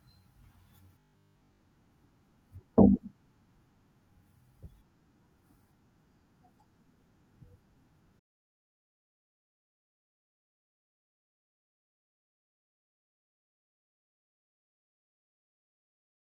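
Speech, with robotic sound from repeated short buffers from 1.00 to 1.62 s: a rigid 50 Hz buzz, likely from about 20 ms chunks being looped while most of the real audio is skipped. Unlike codec warble, the pitch stays fixed rather than smeared.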